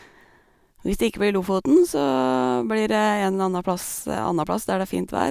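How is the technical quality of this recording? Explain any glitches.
No technical faults can be heard in this speech recording. There are no glitches to explain at any point in the clip.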